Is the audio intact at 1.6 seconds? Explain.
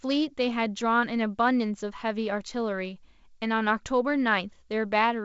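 Yes, the audio is intact at 1.6 seconds; nothing breaks or disturbs the sound at that moment.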